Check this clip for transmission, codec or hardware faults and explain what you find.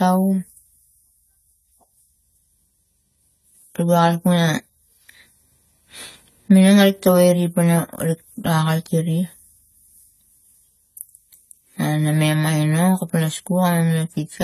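There's one fault, and it runs from start to finish: AAC compression, likely from a low-bitrate AAC-LC encode. Nothing gets through above 14.1 kHz, and the codec damage is plainly audible, which fits a rate around 32 kbps. The encoder discards spectral detail its hearing model judges unimportant, so the speech comes out dull and smeared, with a warbly, fizzy edge on sibilants.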